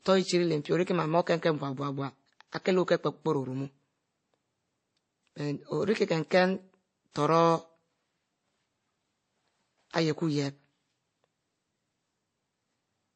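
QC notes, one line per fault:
Throughout, transcoding between lossy codecs: the speech is dull, with nothing above about 8.3 kHz, and carries two layers of artefacts at once: a swirly, watery smearing, plus the second codec's own artefacts on top. This is likely a low-rate MP3 encode, around 32 kbit/s, re-encoded to WMA near 64 kbit/s. The WMA stage wasted bits on the MP3 damage, added its own, and kept the earlier band limit.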